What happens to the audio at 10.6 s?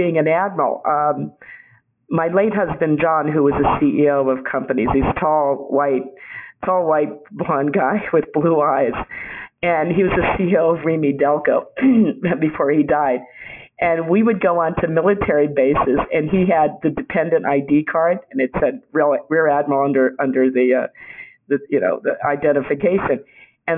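Aliasing is present at 10.6 s, as it is across the whole clip. Content above about 3 kHz folds back below that point, which fits a rate drop to 6 kHz without filtering. The result is a gritty, metallic haze roughly 15 dB under the main sound.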